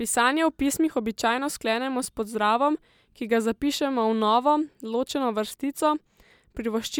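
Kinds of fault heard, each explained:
No faults are heard anywhere in this recording.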